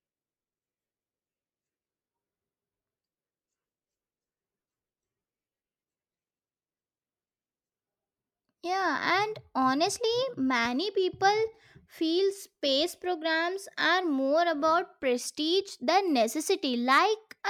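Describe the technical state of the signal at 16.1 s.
At 16.1 s the speech signal is intact, with no audible technical fault at that moment.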